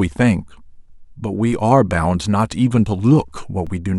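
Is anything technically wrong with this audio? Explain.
Yes. A DC step occurs at 1.53 s and again at 3.67 s. The zero line jumps by about -25 dBFS, then decays through a 2 Hz high-pass. Each jump gives a low thump.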